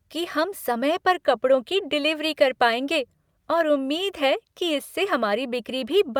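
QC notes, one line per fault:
No faults heard anywhere in the speech.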